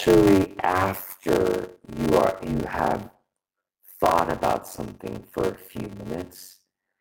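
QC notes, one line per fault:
Throughout: block size mismatch (padded). There's a steady buzz at about 93.8 Hz, and everything runs slow at 0.625x speed with the pitch staying roughly where it should. One stage is handing over shorter chunks than the next one pulls in, so each read gets its tail filled with silence. That fits a 512-sample read receiving about 320 samples of real audio. The repeating gap makes the buzz, and the padding stretches the timing.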